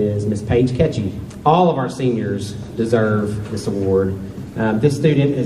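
Listening through the recording, nothing stood out as a technical problem at any point.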